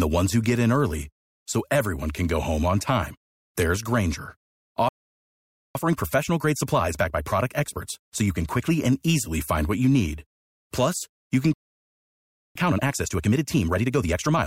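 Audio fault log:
4.89–5.75 s, playback stall: the speech cuts out mid-flow into silence for about 0.86 s, then resumes. The player likely ran out of data or had its thread blocked, leaving nothing to output until it recovered.
5.75–8.75 s, time-compressed catch-up: speech comes out hurried at 1.25 times normal speed but at normal pitch, settling before "and easily find what". The player works off its backlog by cutting out small pieces and cross-fading the joins.
11.53–12.55 s, playback stall: right after "you can" the speech stops again, this time for about 1.02 s of silence. It is likely the same cause, with the player starved of data or blocked before it recovered.
12.55–14.47 s, time-compressed catch-up: following "you can" and the gap, speech runs at 1.5 times normal speed with unchanged pitch until the end. Short pieces are removed and cross-faded to clear the larger backlog left by the longer stall.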